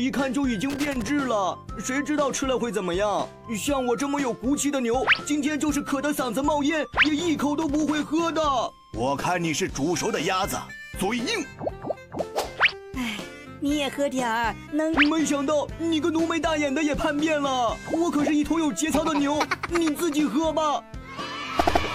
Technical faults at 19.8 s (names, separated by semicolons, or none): none